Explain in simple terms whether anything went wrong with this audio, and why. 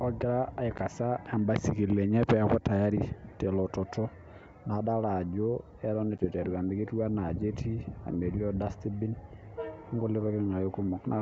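Yes, there are two brief dropouts, and they're packet loss on an ADPCM call. At about 0.78 s and again from 6.18 to 6.26 s the speech cuts to silence for roughly 10 ms, which sounds like a single packet going missing each time. Because this kind of coding predicts each bit of sound from the last, the decoder loses its place, so the speech comes back slightly distorted before settling. The G.722 wideband sound itself stays clear around those spots.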